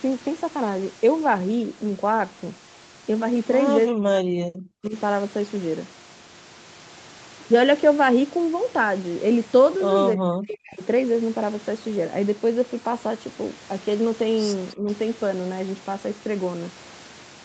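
From 3.87 to 4.95 s, 10.15 to 10.81 s and briefly at 14.74 s, the speech is suppressed in double talk, likely an echo canceller mistaking it for echo. Level collapses by up to about 40 dB (about 15 dB at 14.74 s), showing as waveform gaps and faded spectrogram bands.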